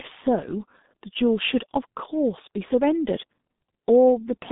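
The whole clip runs through the G.723.1 codec, crushed heavily, which fits a rate around 6.3 kbit/s. Nothing survives above 3.8 kHz, so the speech comes out muffled and hoarse, with smeared consonants.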